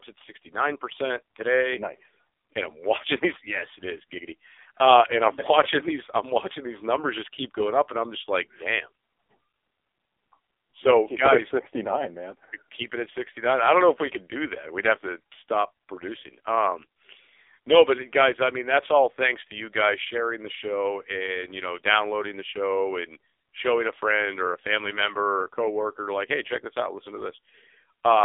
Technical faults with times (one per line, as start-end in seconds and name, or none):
0.00-28.24 AMR narrowband mobile codec